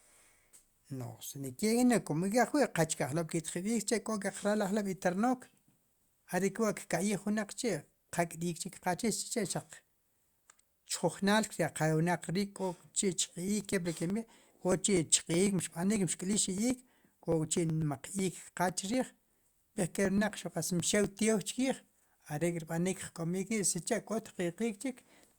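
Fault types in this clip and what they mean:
Periodic USB or driver dropouts: Regular ticks roughly eight times a second, every 0.124 s from 13.36 to 21.04 s, as about a millisecond of speech is skipped each time because a recurring background task stalls the USB bus or audio driver.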